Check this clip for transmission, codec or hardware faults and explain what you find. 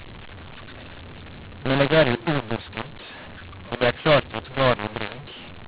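One fault runs through the whole clip: the mu-law and A-law mix-up. The speech was coded with A-law and decoded as mu-law. Each 8-bit code maps to the wrong level. Loudness is scrambled, so speech turns harsh and gritty. Quiet gaps fill with hiss. The G.711 band limit holds, with nothing above 4 kHz.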